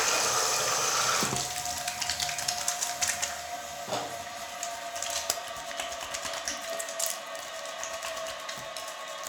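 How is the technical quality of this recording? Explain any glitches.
No technical faults are audible.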